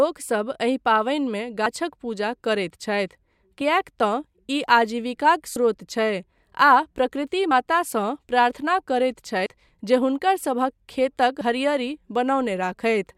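At 3.61, 5.56, 7.51 and 9.46 s the speech skips forward. Each skip drops about 50 ms of sound. The two sides join with no gap. The even spacing points to audio missing between chunks. The cause is likely 2 s processing chunks losing audio at each handover.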